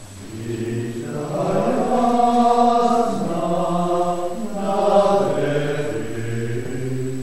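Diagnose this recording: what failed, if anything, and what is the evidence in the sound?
A DC step at 1.51 s shifts the waveform's zero line by about -30 dBFS and holds that offset until the end at 7.22 s. The stage is the converter or analogue input. The jump registers as a single low thump or click while the sound carries on unchanged.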